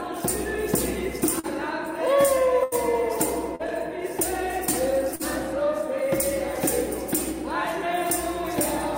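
Packets arriving too late or not at all cause short concealed packet loss at 1.39 to 1.46 s, 3.55 to 3.62 s and 5.15 to 5.22 s. Each time, about 40 ms never reached the decoder, and the receiver extended the preceding sound before blending back, so each spot is a brief smear or wobble. A burst of packet loss at 2.63 to 2.74 s drops about 80 ms in a row. The concealment holds the last sound and fades it as a buzz or hiss, then playback resumes with that stretch missing.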